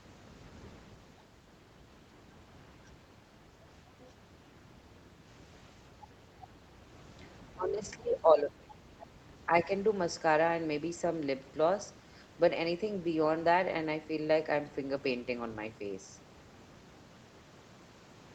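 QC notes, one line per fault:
4.02–4.08 s and 8.70–8.75 s, other side's voice leaking through: two brief, faint scraps of a second voice sit far beneath the talker, roughly 30 dB down. These are likely residual loudspeaker echo the echo canceller missed. Unlike gating, something is added rather than taken away.
5.11–5.23 s, background gated by the echo canceller: the room noise dips by about 6 dB for roughly a tenth of a second, then returns. The canceller clamped the microphone while the loudspeaker played. Only the background drops; no speech is cut and no second voice appears.
7.53–9.70 s, speech suppressed in double talk: the talker's speech repeatedly dips or breaks up, very deeply at worst, around 30 dB, for about a second and a half in total. This is likely the canceller mistaking overlapping talk for echo. Unlike gating, the talker's own speech is removed.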